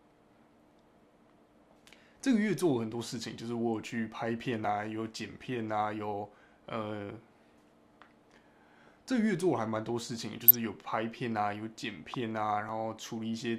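At 4.65 s the sound jumps ahead by a short piece, around 15 ms, with no gap. This is likely a dropped buffer (overrun): samples were overwritten before being read, and the two sides were joined. The waveform shows an abrupt discontinuity, and the spectrogram shows a thin vertical broadband line. From 10.33 to 10.67 s, and more lightly from 12.04 to 12.23 s, DAB burbling adds short blips of noise. Bit errors slipped past error correction into the MP2 data, putting short noise blips into single sub-bands. On a spectrogram this appears as blocky, flickering horizontal patches. At 12.69 s a second, shorter jump of roughly 5 ms follows, with the same join in the waveform.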